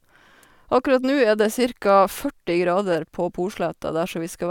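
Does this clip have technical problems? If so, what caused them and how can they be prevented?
No, the speech signal shows no audible technical faults, so there is nothing here that needs preventing.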